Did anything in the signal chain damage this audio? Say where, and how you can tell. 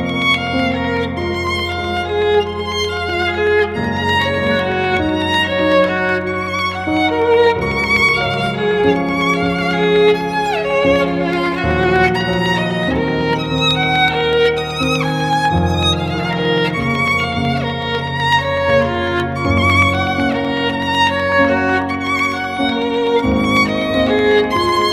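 Yes, the driver stage: periodic USB or driver dropouts, regular ticks every 0.125 s from 0.09 to 24.82 s, each skipping about a tenth of a millisecond.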